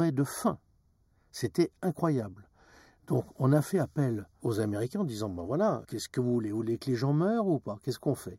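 Throughout the speech there is a hollow, phasey coloration with fixed notches, the first around 3 kHz. This is channel delay (comb filtering): one channel ran roughly a fifth of a millisecond late, and summing to mono cancelled shared content at evenly spaced frequencies.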